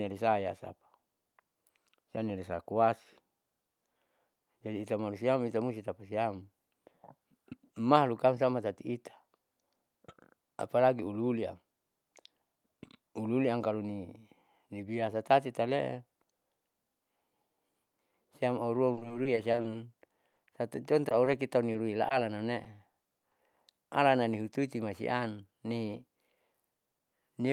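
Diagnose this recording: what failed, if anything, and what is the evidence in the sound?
Network-stage repeated packet loss (robotic sound) at 18.93–19.66, 20.08–20.49 and 22.65–23.34 s: gaps up to 40 ms are patched with extended sound, showing as smeared, repeating spectrogram bands.

A short stall from a late packet at 21.09–21.13 s: the jitter buffer ran dry and the last sound was held, a flat, frozen spectrogram slice.

Short concealed packet loss at 21.25, 21.73 and 22.09 s, 20 ms missing each: loss concealment bridges it, leaving a brief smear in the waveform.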